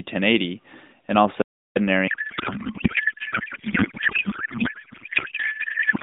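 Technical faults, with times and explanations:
1.42–1.76 s, audio dropout to silence: the speech cuts off for about 0.34 s and resumes mid-flow. The gap is silent with no line hiss or room tone, unlike a natural pause. Briefly lost input, with zeros still written, is the likely cause.
2.08 s to the end, codec payload misread: the narrowband speech abruptly becomes garbled noise and warble that barely follows it, far worse than ordinary AMR buzz, because octet-aligned AMR frames are decoded as bandwidth-efficient, putting every field in the wrong bits.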